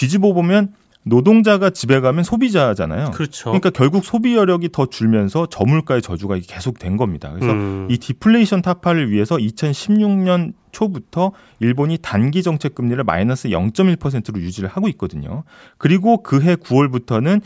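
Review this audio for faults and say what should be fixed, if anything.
No faults can be heard anywhere in this speech recording. Nothing needs to be fixed.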